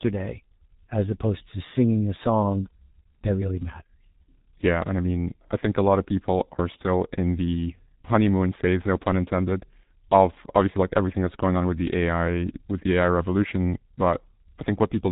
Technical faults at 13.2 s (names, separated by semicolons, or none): G.723.1 codec